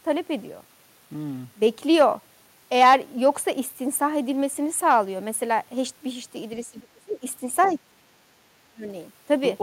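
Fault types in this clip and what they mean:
Speech suppressed in double talk: The talker's speech drops by roughly 20 to 25 dB at 6.66, 7.68 and 8.72 s, likely an echo canceller turning down overlapping talk.
Other side's voice leaking through: A faint second voice, about 25 dB below the speech, slips through briefly at 7.62 s, likely loudspeaker echo the canceller missed.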